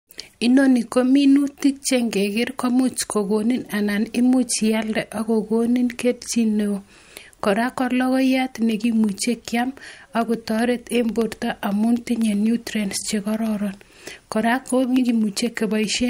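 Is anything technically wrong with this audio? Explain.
Yes. From 8.72 s to 15.96 s there are periodic USB or driver dropouts: every 0.125 s something stalls the bus or driver, and a tiny sliver of audio, well under a millisecond, is replaced by silence. You hear roughly fifty evenly spaced ticks riding on the speech.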